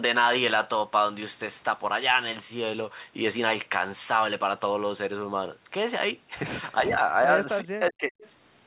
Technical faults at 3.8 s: none

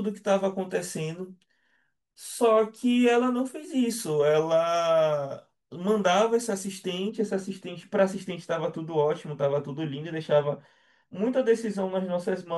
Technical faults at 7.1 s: de-emphasis applied wrongly

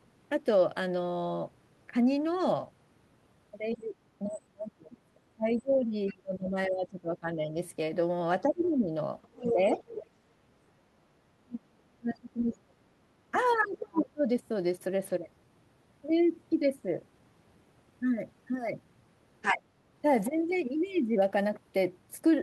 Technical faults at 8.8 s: speech suppressed in double talk; other side's voice leaking through

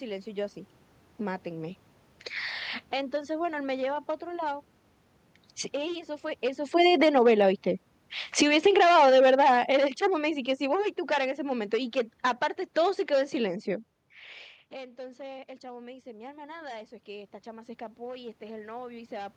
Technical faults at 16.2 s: automatic gain rising

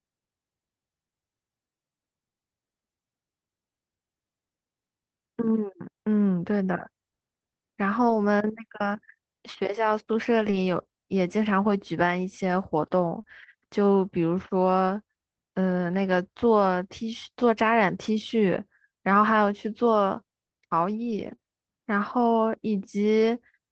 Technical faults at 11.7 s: lost packet rebuilt from error correction

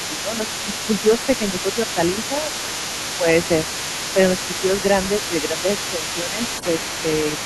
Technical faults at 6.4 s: other side's voice leaking through; speech suppressed in double talk

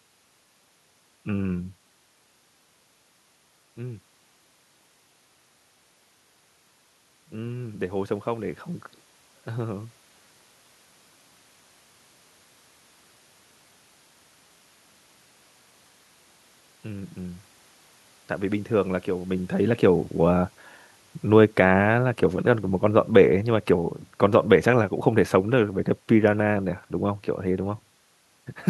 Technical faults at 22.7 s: automatic gain falling

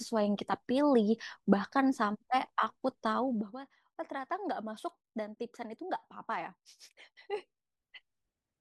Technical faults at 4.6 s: none

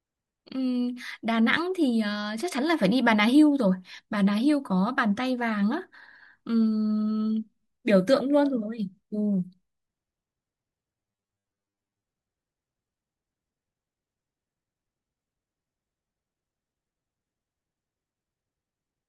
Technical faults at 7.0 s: none

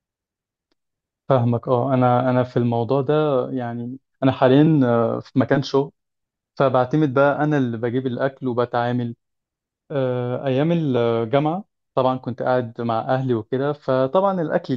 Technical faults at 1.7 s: none

